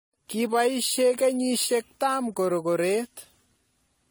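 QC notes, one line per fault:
Throughout, generation loss: the speech sounds swirly, hollow and smeared, with blurred attacks, more than one pass at about 64 kbit/s AAC would give. It was likely re-encoded around five times, each pass re-quantising on a shifted frame grid so artefacts compound.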